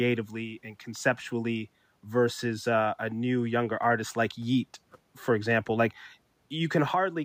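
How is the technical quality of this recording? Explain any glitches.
No audible glitches or faults.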